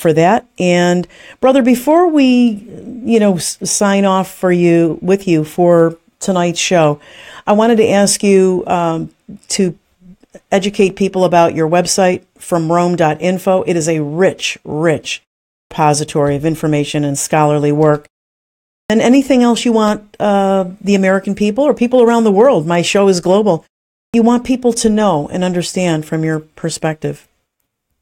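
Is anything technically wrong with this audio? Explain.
Yes. Clipped start after a pause occurs at 15.58 s, 18.78 s and 24.02 s. The output device sleeps during brief silences of 0.41 to 0.78 s and needs time to relock, losing 118 to 126 ms. Speech after "is a rich rich", at "then anything else you" and at "you want people to" begins abruptly, missing its first sounds.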